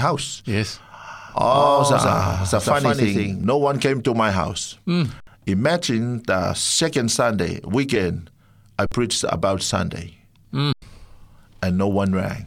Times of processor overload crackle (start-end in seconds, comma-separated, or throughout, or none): none